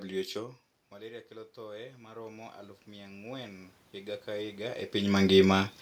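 Automatic gain rising runs from 0.92 s to 5.43 s. After the talker moves away from the microphone around half a second in, the input level falls by about 18 dB. The gain control then slowly adds about 15 dB, so the voice and the room noise swell together.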